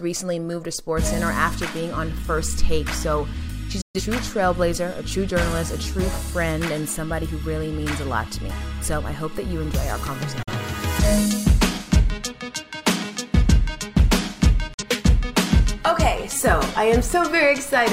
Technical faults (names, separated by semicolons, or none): digital broadcast dropout